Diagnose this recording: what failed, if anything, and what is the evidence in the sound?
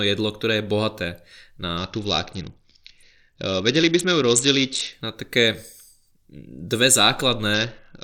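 Codec stage: a Bluetooth SBC bit pool drop, 1.77–4.93 s and 7.54 s to the end. Treble dulls and grit rises, consistent with a bit pool near 7 (about 66 kbps).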